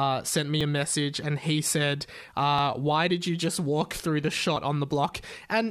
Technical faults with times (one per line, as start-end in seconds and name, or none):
0.61 overlap between stream segments
2.59 overlap between stream segments
4.56 overlap between stream segments